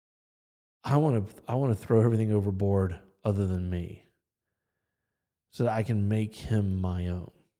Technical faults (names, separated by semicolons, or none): none